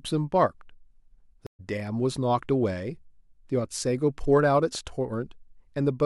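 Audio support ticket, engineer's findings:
Stream reconnect in the speech, 1.47–1.60 s: 124 ms silence, then audio resumes roughly 70 ms further on. Player's connection dropped and a fresh decoder restarted mid-stream. Content skips ahead, unlike a plain dropout gap.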